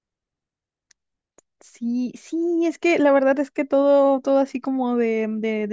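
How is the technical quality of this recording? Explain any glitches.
No technical glitches can be heard anywhere in this recording. There is nothing to explain, as no event interrupts or disturbs the speech at any point.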